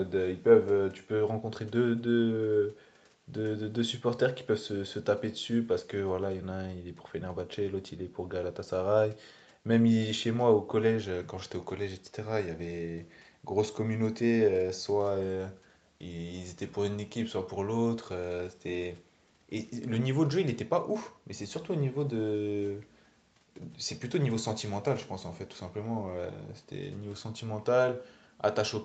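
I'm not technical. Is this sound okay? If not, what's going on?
Yes, no faults here.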